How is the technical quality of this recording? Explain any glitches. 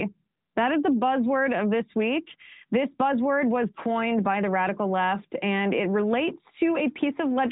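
No glitches or faults can be heard here.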